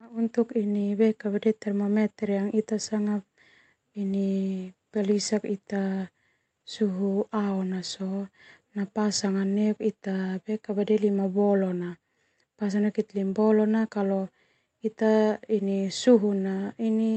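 Speech over a call link, with no faults heard.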